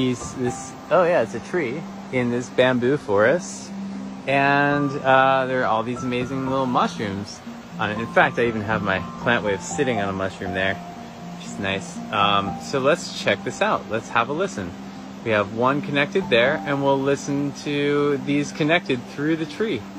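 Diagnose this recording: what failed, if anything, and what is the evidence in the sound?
Nothing failed here: the signal chain holds together from capture to playback with no dropouts, clicks, distortion or timing slips anywhere along the way.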